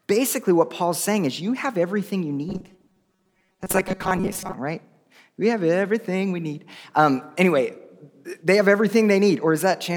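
From 2.49 to 4.54 s, just after "you have everything you", the speech collapses into a rigid, metallic buzz pitched at 188 Hz that still loosely tracks the syllables. This is robotic sound from repeated short buffers. The likely cause is audio arriving too seldom, so playback keeps looping the last fragment, about 5.3 ms long to match that pitch, while the real signal is dropped. Roughly half of the passage is repeated material.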